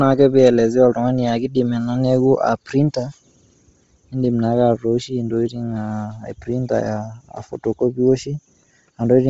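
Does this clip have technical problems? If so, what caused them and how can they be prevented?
Yes. Throughout the speech, nothing sounds above 7.8 kHz, and the top of the band has a heavy grainy, breathy noise fill. This is likely Bluetooth LC3 compression at a low bitrate near 24 kbps. Unlike a simple low-pass filter, the remaining highs are synthetic hiss rather than merely dull. Using a higher LC3 bitrate or a wired connection would prevent it.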